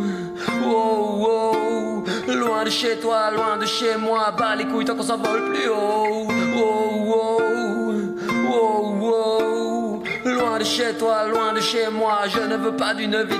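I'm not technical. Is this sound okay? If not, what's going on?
Yes, nothing in this recording points to a technical problem with how the sound was captured or transmitted.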